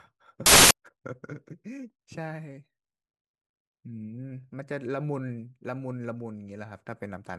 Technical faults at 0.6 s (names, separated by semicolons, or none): samples built from the wrong bytes